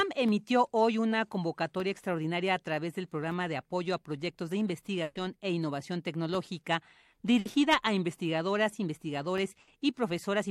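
Three bursts of packet loss hit this speech. Each time, a run of packets never arrived in time, so the receiver stretched the last sound and let it fade before resuming with that stretch of audio gone. From 5.03 to 5.17 s, after "apoyo a proyectos de", about 120 ms is replaced by the last sound held and fading away. Shorter 60 ms gaps follow at 7.39 to 7.47 s, after "e innovación tecnológica", and at 9.61 to 9.69 s.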